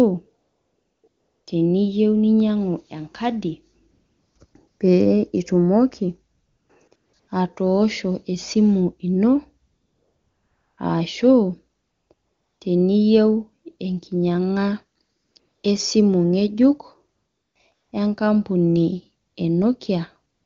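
Across the clip, from about 0.41 s to the end at 20.5 s, AMR comfort noise keeps stepping in. The phone decided nobody was talking, stopped sending speech frames, and the receiver painted in smooth synthetic hiss. Gaps run from 20 ms up to 1.1 s, with a tight cluster around 6.9 to 7.3 s just before "atosho esimu". The clean wideband speech between them suggests a high AMR-WB rate.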